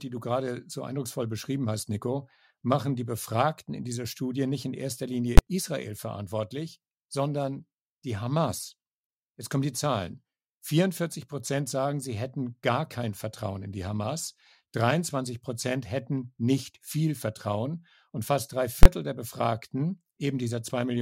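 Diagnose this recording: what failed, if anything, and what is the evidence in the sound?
Two sharp, very loud bangs cut through the speech: one at 5.38 s, right after "nicht in erster", and another from 18.83 to 18.86 s, after "fast drei". These are invalid numbers at full scale, a processing-stage failure. A calculation produced infinite or invalid values, and the output was pinned to maximum amplitude for a whole block. The blocks last about 12 ms and 23 ms, fitting 512- and 1024-sample buffers, too short to separate into two pops.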